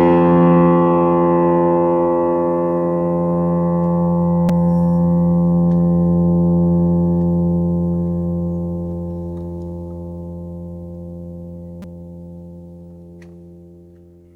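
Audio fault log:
4.49 s and 11.82–11.84 s, repeated buffer: New audio arrived late, so the last piece of sound played again, twice extra at 4.49 s and four times extra at 11.82 s. Each repeat has a hard join. The repeats point to a buffer of about 5 ms, so each event is heard as a click or a brief buzz. Little or no audio is lost.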